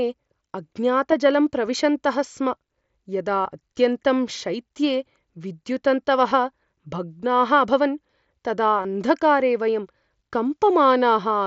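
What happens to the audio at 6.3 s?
Concealed Bluetooth headset packet loss at 6.30 s: a 15 ms dropout, patched by repeating the best-matching recent waveform, so it sounds like a brief buzzy tone held at full level, with a small warble where the real audio returns.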